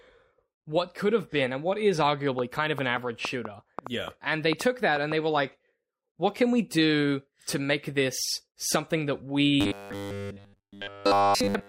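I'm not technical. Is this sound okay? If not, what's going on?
No. A train of clicks runs from 2.39 to 5.13 s, starting just after "been and what is" and stopping before "they were like what". About ten sharp ticks land at an uneven pace of roughly four per second. They sit on top of the speech and are loud enough to stand out. They are likely caused by electrical interference from nearby equipment or a faulty connection or power supply, which pushes a brief pulse into the sound again and again.

From 9.61 s to the end, after "make this something that", the speech has a robotic sound from repeated short buffers. It sounds metallic and buzzy, with a fixed hum at 100 Hz, but still loosely follows the talking. The likely cause is fresh audio arriving too slowly, so the software keeps replaying the last tiny slice, about 10 ms long, while the real speech is lost. Here practically all of that stretch is replayed material.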